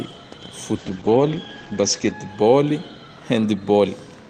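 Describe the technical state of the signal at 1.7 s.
A call bitrate drop covers 1.7 s, running from 0.77 to 2.35 s. The encoder cut its bit budget, which fits a fall from 32 to 10 kbps, and the top end narrowed from 20 kHz to 8 kHz. The speech sounds rough, watery or muffled.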